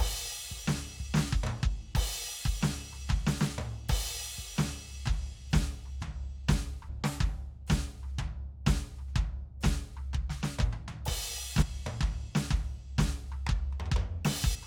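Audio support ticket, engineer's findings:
Short glitches in the music at 6.88 s, 11.61–11.63 s and 14.54–14.56 s. Damaged data in a compressed stream: corrupt frames, so the decoder loses sync and resyncs at the next header.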